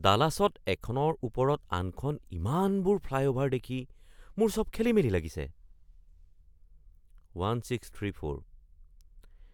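Recorded speech with nothing technically wrong to report. No moment in it needs a time or a cause.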